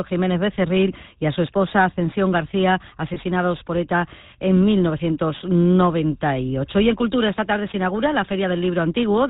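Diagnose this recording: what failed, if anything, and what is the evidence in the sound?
The speech has a buzzy, gravelly roughness throughout, with nothing audible above 4 kHz and plainly audible coding damage. This is the GSM full-rate codec, consistent with its 13 kbps stream. Its vocal-tract model is driven by a sparse, regularly spaced pulse excitation, which leaves that coarse buzz.

From 3.14 to 3.18 s the sound briefly locks into a rough, metallic ring before normal speech resumes. This is lost GSM frames in the network path, fitting a single missing 20 ms frame. The decoder concealed it by repeating the last good frame's settings.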